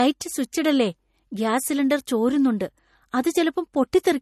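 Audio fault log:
Throughout, MP3 compression: the speech has a watery, swirly quality and nothing above 13.1 kHz, likely from a starved MP3 encoder cutting the treble and switching weak frequency lines on and off between frames, which fits a bitrate around 40 kbps.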